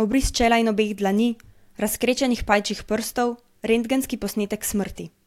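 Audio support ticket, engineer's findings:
Had a careful listen to the speech and found nothing wrong with it, so there's no fault to log on this one.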